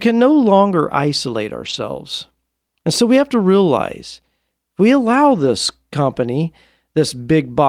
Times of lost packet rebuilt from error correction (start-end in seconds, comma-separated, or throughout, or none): 1.65-1.75, 5.31-5.49, 6.13-6.15